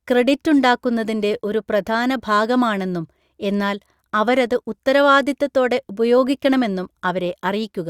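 No technical faults can be heard anywhere in the speech.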